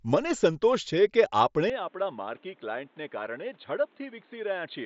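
The input was likely switched to a poorer device, at 1.70 s, and the change holds to the end of the speech. With no gap at the switch, the sound drops from the mSBC headset path's band of about 7.7 kHz to nothing above 4.2 kHz, turning dull and boxy. The level falls by about 10 dB, and a new background noise appears, roughly 30 dB below the speech.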